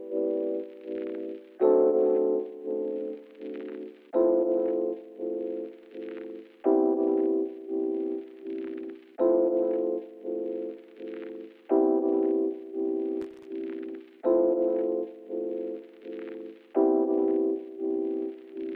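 At 13.22 s there's a burst of loose connector crackle that runs to about 13.45 s, roughly a quarter of a second. What's going on is a worn or dirty contact somewhere in the chain, shifting just enough that the connection keeps making and breaking in quick succession. Each break chops the signal, so instead of a clean interruption you get an irregular scratchy crackle sitting over the sound for that stretch, then it settles.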